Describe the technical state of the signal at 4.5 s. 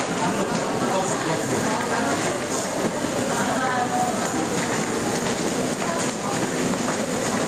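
At 4.5 s the signal shows gain pumping, which runs through the whole clip rather than starting or stopping at this point. The level swings by roughly 5 dB. Loud and soft parts sit close together, and the sound feels squashed. The likely cause is input gain set far too high, with a fast limiter or compressor pulling it back on every peak.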